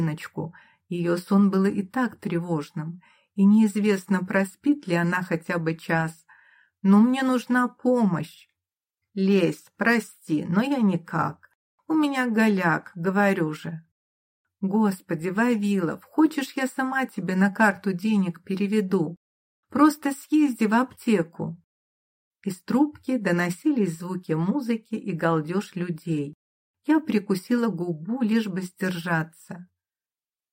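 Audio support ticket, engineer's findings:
No faults found on listening. No dropouts, clicks, distortion or level problems heard at any point in the audio.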